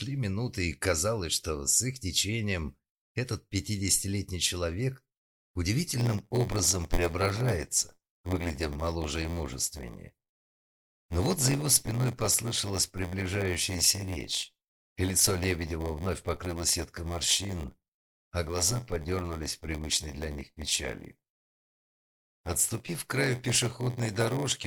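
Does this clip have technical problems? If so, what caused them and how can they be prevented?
Yes. From 5.95 s to the end there is a block size mismatch (padded). One stage delivers shorter blocks than the next reads, which fits a 512-sample read size, and the remainder of each block is zero-filled. The repeated gaps cause a buzz at 86.1 Hz, and the audio runs at 0.938 times normal speed with timbre unchanged. Matching block sizes between stages, or buffering until a full block is available, prevents it.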